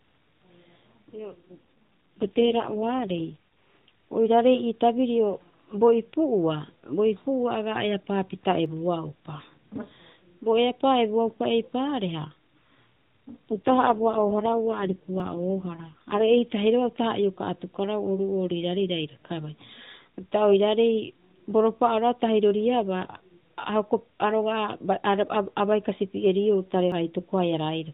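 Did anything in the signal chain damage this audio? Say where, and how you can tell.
Yes. The network forced an AMR rate drop from 12.2 to 4.75 kbps at 1.18–3.36 s and 13.52–16.42 s, so the narrowband speech turns buzzy and synthetic, then recovers.

At the driver or buffer stage, a dropped buffer (overrun) is the likely cause of small jumps forward, around 20 ms lost, at 8.66 s, 15.2 s and 26.92 s, just after "a bai kasipieriou".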